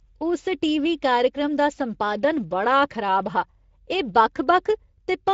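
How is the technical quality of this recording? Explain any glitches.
The quality is noticeably degraded by codec compression across the whole clip. Speex codec artefacts run from start to finish: this CELP speech codec models speech with a limited excitation budget, and the plainly audible damage here, consistent with a setting near 16.8 kbps, leaves the speech sounding noisy and hoarse.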